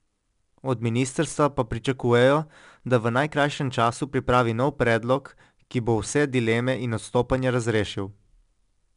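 From start to finish the speech carries 4-bit ADPCM compression, and it's plainly audible. Each sample is coded as a coarse 4-bit step from a predicted value, so the error is a gritty hiss that rises and falls with the speech, loudest on the strong syllables and smearing the sharp onsets where the step size can't keep up. Nothing survives above 10.6 kHz, which dulls the top end and fits a low sample rate at around 89 kbps.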